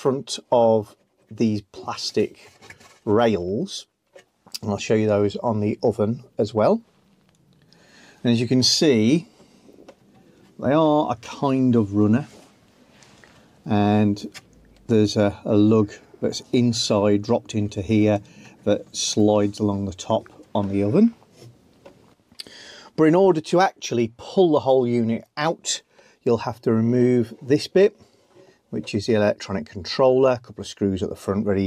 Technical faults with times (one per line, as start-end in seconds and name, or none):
19.20 bit error spike